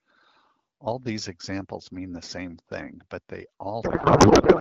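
Speech, carried at HD Voice quality (AMR wideband at 12.65 kbit/s, with only light codec damage), shows a codec payload misread from 3.83 s to the end, right after "same thing but they": the speech turns into garbled warbly noise that barely tracks it, consistent with octet-aligned AMR being decoded as bandwidth-efficient. Unlike packet loss, it never recovers or falls silent.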